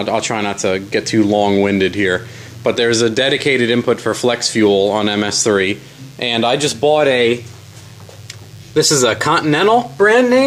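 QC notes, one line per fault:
Throughout: DECT cordless phone buzz. There's a thin, steady buzz sitting under everything at 100 Hz, with a stack of harmonics that gives it that edgy, wiry quality. It comes from a DECT handset or base station close by, firing a short radio burst every 10 ms. Something in the audio path rectifies those bursts into a buzz at the same rate. It's well down, roughly 35 dB under the signal, but it never lets up.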